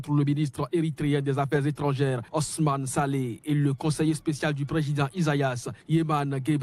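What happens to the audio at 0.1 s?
Nothing goes wrong at 0.1 s; the audio plays through that moment intact, with no dropout, click or distortion.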